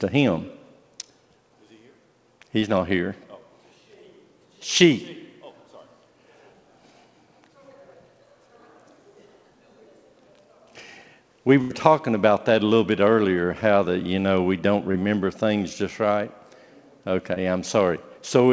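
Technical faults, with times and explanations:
2.60–2.64 s, 4.78–4.82 s, 14.92–14.96 s and 17.34–17.38 s: short concealed packet loss. Each time about 20 ms arrived too late, so the receiver stretched the preceding sound over the gap, leaving a quick smear or wobble.
11.62–11.72 s: burst of packet loss. Roughly 80 ms went missing in one go. The receiver carried the last sound on and faded it as a buzz or hiss, then picked up further along with that stretch gone.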